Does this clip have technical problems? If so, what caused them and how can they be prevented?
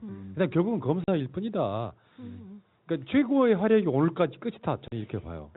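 Yes. Packet loss filled with silence occurs at 1.04 to 1.08 s and 4.88 to 4.92 s. Each 40 ms gap, which fits two lost 20 ms packets, was replaced by digital silence, so the speech drops out abruptly, while the narrowband G.711 telephone sound continues around it. Using packet loss concealment at the receiver, plus a jitter buffer or forward error correction on the link, would prevent these holes.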